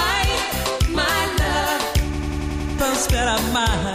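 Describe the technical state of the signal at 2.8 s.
Right around 2.8 s you're at the tail of a system hang loop running from 2.14 to 2.79 s. The machine stalled while the hardware kept replaying one roughly 93 ms chunk, consistent with a 4096-sample buffer, seven times over. That gives a machine-gun stutter at 10.8 Hz, with about 0.7 s of audio lost.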